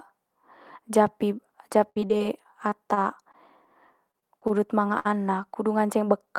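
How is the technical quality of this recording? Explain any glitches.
Technical quality is compromised by three stretches of network damage in this speech clip.

From 1.89 to 3.35 s, and again from 4.11 to 4.51 s, there is repeated packet loss with a robotic sound. The first stretch has nine gaps, the longest about 65 ms. The second has four short ones. Each lost piece is patched by extending the sound just before it. The patches come close together. Speech turns choppy and robotic, with fragments dropped.

At 4.99 to 5.07 s comes a burst of packet loss. Several packets in a row went missing. The receiver held the last sound and faded it down for about 54 ms. A voiced sound becomes a brief buzz, other sounds a dying hiss. Then speech resumes later, with roughly 40 ms lost.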